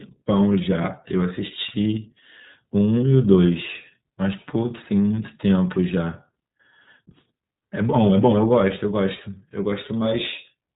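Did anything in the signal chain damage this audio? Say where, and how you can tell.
Yes. The damage happens at the codec stage: the speech has gone through the iLBC codec for its whole length. The top end stops dead at 4 kHz, so it sounds like a phone call, and there's a plainly audible rough, slightly synthetic grain on every syllable. Each frame's excitation is coded from scratch, with no carry-over from the previous frame, and the texture fits 30 ms frames at around 13.3 kbps.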